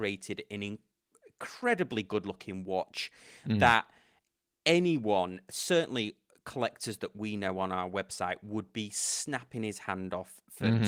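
No technical faults can be heard in this recording.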